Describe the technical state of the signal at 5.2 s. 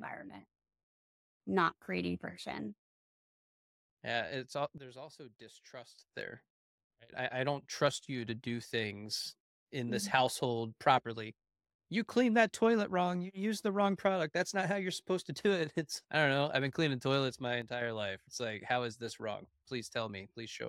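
At 5.2 s the signal sits inside a sudden gain jump running from 4.78 to 5.99 s, right after "it's all". Speech and background noise drop together by about 14 dB, likely from a digital gain step applied between adjacent samples without any ramp.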